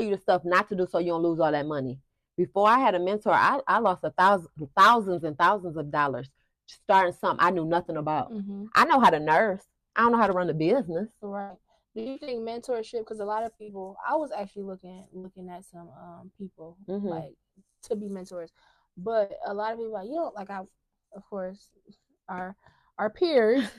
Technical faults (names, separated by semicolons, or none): burst of packet loss; short concealed packet loss